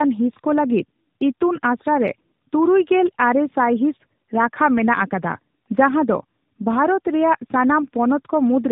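A speech recording with tandem speech coding throughout. Nothing above 3.8 kHz survives. The sound is rough, muffled and warbly, which fits two narrowband AMR-type coders in series, likely with a G.711 hop between. The second coder re-encodes the first coder's already degraded output.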